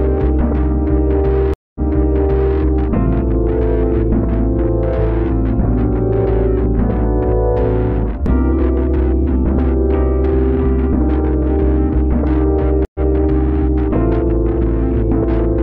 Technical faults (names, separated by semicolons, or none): stream reconnect